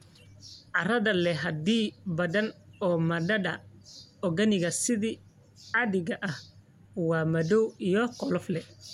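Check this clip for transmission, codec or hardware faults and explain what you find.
Nothing stood out on listening to the speech here; no audible problem was found.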